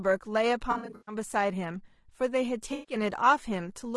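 Across the whole clip the speech sounds rough and grainy, with a hiss between the harmonics and a thin, synthetic upper band. This is likely low-delay AAC compression (AAC-ELD), whose short frames resolve pitch poorly; the plainly audible damage points to a bitrate near 32 kbps.

From 0.71 to 1.15 s the sound turns smeared and noisy in patches, and the same smearing returns from 2.73 to 2.95 s. This is AAC frame loss with concealment. The decoder rebuilt the missing stretches from the last good spectrum. In the first patch the gaps total 260 ms, scattered across the window, and the longest unbroken gap runs about a tenth of a second. The second patch loses 140 ms.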